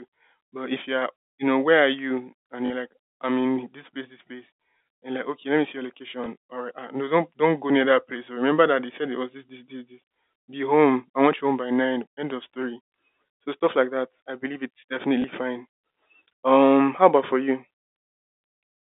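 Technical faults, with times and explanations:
2.66 to 2.70 s, packet loss with last packet repeated: about 40 ms went missing, which fits two 20 ms packets, and the receiver just replayed the last one it had. The run gives a brief 50 Hz robotic buzz.
6.24 to 6.26 s, packet loss with last packet repeated: a single 20 ms gap filled the same way, heard as a small blip.
15.22 to 15.24 s, packet loss with last packet repeated: another 20 ms replay, same small blip, sitting on the narrow 250 Hz to 3.7 kHz telephone band of the G.711 line.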